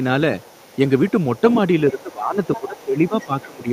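A second voice keeps bleeding in underneath: the other side's voice leaking through at 0.39–0.89, 1.08–1.59 and 1.79–2.14 s, then again at 2.44–2.84 and 3.05–3.63 s. It's likely loudspeaker echo the canceller didn't fully strip out. It sits about 15 to 30 dB under the main talker, faint in some stretches and quite noticeable in others.

From 1.91 to 3.68 s there's also speech suppressed in double talk. The main voice dips in patches totalling about a second, by as much as about 20 dB, likely because the canceller ducked everything while both sides overlapped.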